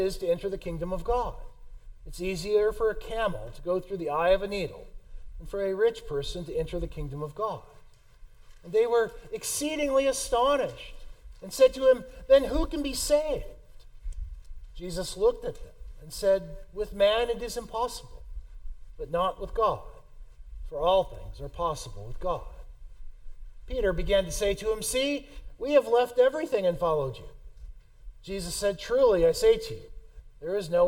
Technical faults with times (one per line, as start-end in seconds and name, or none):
none